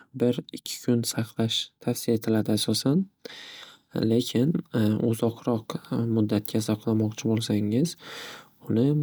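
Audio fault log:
No fault is audible: the speech signal stays continuous from its opening to its close, with nothing that points to a recording, playback or transmission problem.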